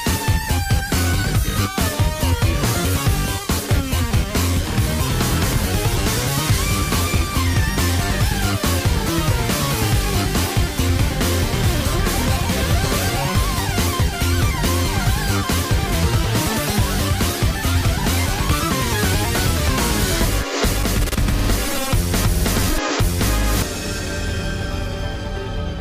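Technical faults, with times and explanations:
No technical faults detected.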